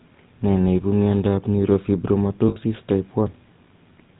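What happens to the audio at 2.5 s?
From 2.48 to 2.57 s the sound stops moving and hangs on a rough, metallic ring for about 80 ms. That is lost GSM frames. The decoder got no usable data for that stretch, which fits four 20 ms frames, so it kept reusing the settings of the last good frame. Unlike a plain dropout, the gap is not silent, and unlike a stutter, nothing is audibly repeated. It is one frozen, buzzy tone before normal sound returns. Around the ring, the GSM full-rate codec damage is plainly audible. Its gravelly roughness and missing top above 4 kHz colour the held sound as well.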